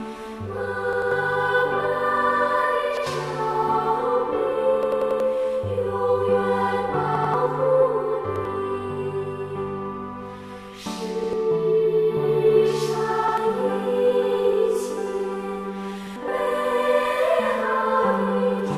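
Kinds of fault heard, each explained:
Repeated buffer: fresh audio kept arriving late, so playback looped the last chunk of about 93 ms, which fits a 4096-sample buffer. You hear eight hard-edged stutters, each chunk replayed one to four extra times, the longest around 4.83 to 5.20 s.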